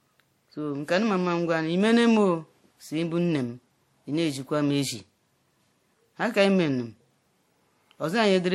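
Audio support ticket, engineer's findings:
Likely transcoding between lossy codecs throughout, 0 to 8.5 s: an MP3 stage around 56 kbit/s feeding a WMA encode around 64 kbit/s. WMA stage spends its bits re-encoding the MP3's artefacts and adds its own. Result on speech: two layers of coding artefacts heard together. Nothing above 16.2 kHz; the lowest cut-off in the chain persists.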